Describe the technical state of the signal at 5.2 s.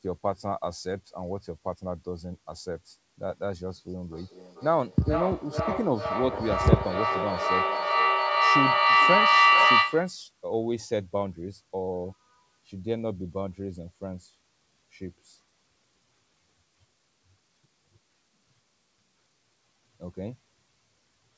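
At 5.2 s, two devices in the same room are joined to one call, and the microphone-to-loudspeaker loop is returning more level on each pass than it sends. That produces a feedback howl from 4.12 s to 10.24 s. The repeats build instead of dying away and collapse onto a tone near 1 kHz, pulsing about every 400 ms and peaking about 8 dB above the speech, within a band that stops at 8 kHz.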